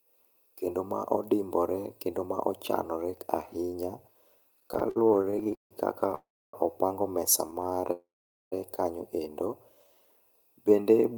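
From 4.57 to 5.73 s the speech stalls repeatedly, a stutter. It halts 20 times, the longest for 161 ms. Packets arrived late, so the receiver kept extending the last sound. About 433 ms is filled in, 38% of the span. Nothing is lost, but it drags and judders.

From 6.15 to 6.55 s comes a call audio freeze. The last sound is held, fades, then goes silent for about 280 ms. Speech resumes where it stopped, 386 ms later. Packets were likely held up in transit, emptying the jitter buffer.

A lighter stutter runs from 7.47 to 7.90 s. Ten short stalls, none over 13 ms, fill 115 ms. That is 27% of the span. The speech drags and stutters.

A second freeze follows at once, from 7.92 to 8.54 s. The sound holds and fades, then about 450 ms is silent. The speech picks up unchanged, now 596 ms late.

From 9.70 to 10.12 s a jitter buffer slow-down stretches the speech. Repeated pitch periods or bits of pauses add 79 ms, so it plays at 83% speed. 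The pitch does not change. Sounds are drawn out while the receiver rebuilds its reserve.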